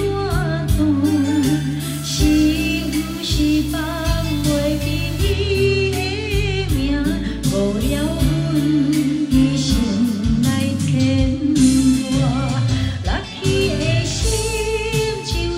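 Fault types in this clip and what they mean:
Low bit depth without dither: From 1.92 to 5.32 s the sound turns grainy and gritty, likely from rounding to about 6 bits. The distortion sits roughly 20 dB below the signal.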